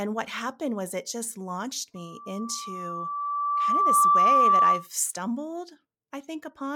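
Right after "was it just launched", at 1.95 s, a loudspeaker feedback squeal at 1.2 kHz swells over roughly two seconds to about 15 dB above the speech, then cuts at 4.87 s.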